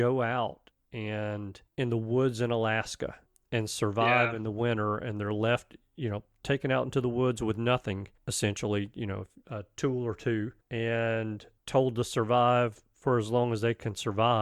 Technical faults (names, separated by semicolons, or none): none